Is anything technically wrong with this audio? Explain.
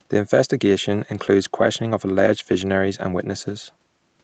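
No, this is speech carried over an ordinary call path, band-limited to about 8 kHz as a wideband Opus link would be, with nothing wrong on it.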